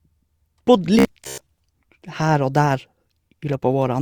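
From 0.99 to 1.47 s, robotic sound from repeated short buffers. About half the speech is a recycled 15 ms chunk, likely from late-arriving audio, forcing a metallic 66.8 Hz buzz.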